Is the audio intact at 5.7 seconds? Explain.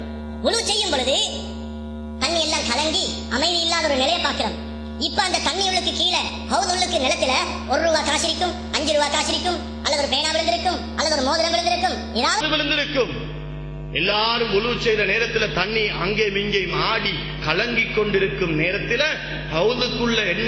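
No. A wrong sample rate fault runs from 0.0 to 12.41 s, covering 5.7 seconds. The samples are played out faster than they were captured, with no conversion between the two rates, so everything is squeezed in time by a single ratio. Here the sound runs 1.5 times too fast and sits 7.02 semitones too high, bright and hurried. The ratio fits audio recorded at 16 kHz and played back at 24 kHz.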